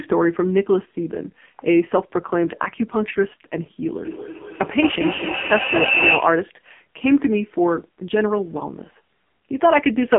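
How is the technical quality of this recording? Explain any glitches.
The quality is poor, with one fault running through the whole clip: AMR narrowband mobile codec. The speech was squeezed through a phone-grade vocal-tract model at a very low rate, heavy enough to fit the 5.9 kbps mode. Only about 150 Hz to 3.4 kHz survives, so the voice sounds thin, muffled, buzzy and synthetic throughout.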